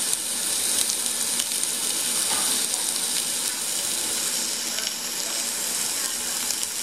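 A recording of everyday sound with a single overlap between stream segments at 1.84 s. About 6 ms of audio is missing there, so the waveform jumps abruptly from one point to a later one, heard as a brief click or tiny skip. The cause is two consecutive stream segments whose time stamps overlap. When joining them, the player discards the overlapping stretch as a duplicate, but that audio was not actually repeated, so it is lost and a discontinuity remains at the seam.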